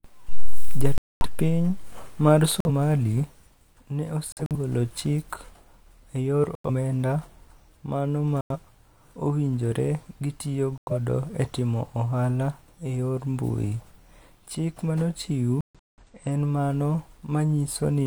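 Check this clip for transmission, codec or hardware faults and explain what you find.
The speech has repeated corrupt frame muted dropouts. Silent holes open abruptly at 0.98–1.26 s, 2.60–2.70 s, 4.32–4.56 s, 6.55–6.70 s after "e yor", 8.41–8.56 s after "mano ma", 10.78–10.93 s before "e timo ohala e", and 15.61–16.04 s. Damaged compressed frames were rejected by the decoder, and silence replaced them. Timing stays intact. Gap lengths point to one to several frames each.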